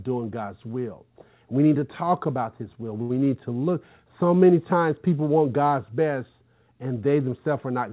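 Speech over a call path with nothing above 4 kHz, carrying one short stall from a late packet at 3.02 to 3.12 s. The jitter buffer ran empty, so the receiver stretched the last sound by 75 ms, then resumed from the same place. Unlike a lost packet, nothing is skipped; the rest simply runs 75 ms late.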